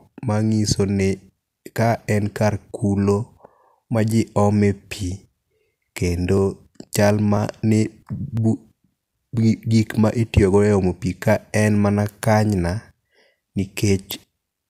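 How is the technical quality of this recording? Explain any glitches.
The recording has one fault: periodic USB or driver dropouts between 6.38 and 9.87 s, starting just before "ma itiyo go e". Every 0.5 s a brief slice of about a millisecond of speech is lost, about seven times in all. A background task stalls the USB bus or audio driver at a fixed interval, and the missing samples are skipped rather than filled with silence. Each splice leaves a small discontinuity, heard as a regular tick that sounds only while the voice is present.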